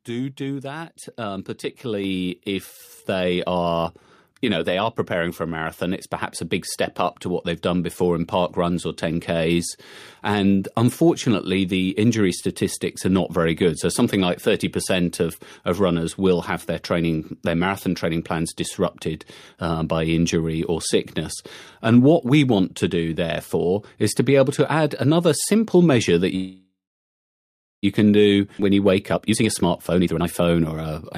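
At 1.02 s, right after "do do", there's a microphone volume stepped up: the call software bumped the input gain about 4 dB in one go, so voice and background jump together. It happens again at 2.04 s, this time about 3 dB.

From 26.35 to 27.85 s, after "another simple measure that", you get a call audio freeze. Packets were likely held up and the jitter buffer ran dry. There's a brief fading fill, then roughly a second of silence, and it resumes at "you can" with nothing lost, just about 1.5 s of delay added.

At 28.58 to 28.60 s there's a skip ahead. About seven tenths of a second of speech drops out and playback joins straight onto "when you wake" with almost no gap.

From 29.13 to 30.87 s a jitter buffer speed-up kicks in. The buffer was holding extra audio, so tiny pitch-period slices get trimmed repeatedly. Speech runs at about 137% speed with unchanged pitch and sounds rushed, clawing back roughly the same seven tenths of a second.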